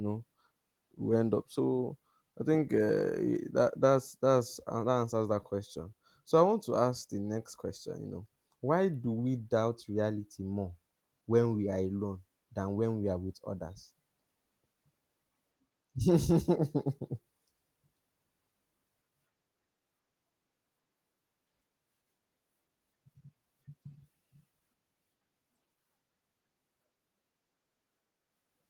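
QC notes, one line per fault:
The speech signal carries only the light coding texture of Opus voice compression, with the full audio band kept, which fits hybrid-mode coding at around 20 kbps.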